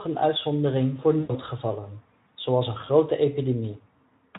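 Speech coded with Speex, where at 1.19 to 1.32 s, right after "een uitzondering voor", VoIP packet loss concealed by the speech codec covers roughly 100 ms of missing audio, which fits about five lost 20 ms frames. The decoder stretches its last pitch into a fading buzzy tone or coloured noise, and the sound stays weak briefly afterwards. That fading fill and slow recovery set it apart from a plain dropout, which would cut to silence.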